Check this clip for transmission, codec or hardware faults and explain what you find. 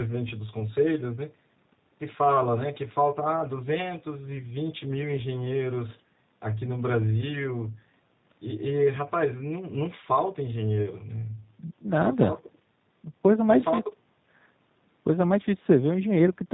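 One fault runs through the entire recording: the speech has passed through a G.729 codec. The codec does not send the waveform itself. It models each 10 ms frame with a vocal tract filter, a pitch predictor and a handful of pulses, at a rate consistent with 8 kbit/s. Nothing above 4 kHz survives, so the speech sounds narrowband. The damage is plainly audible as a rough, slightly synthetic texture throughout.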